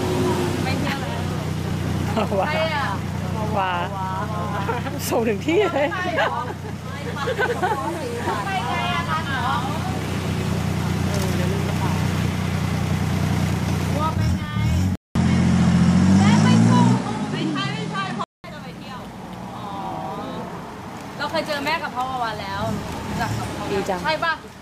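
From 14.95 to 18.44 s the sound is consistent with an input switched to a poorer device, likely a change to another microphone or a headset's call profile. A 200 ms gap marks the switch, after which nothing sounds above 11.4 kHz, the level shifts by around 5 dB, and a new noise floor appears roughly 40 dB below the signal.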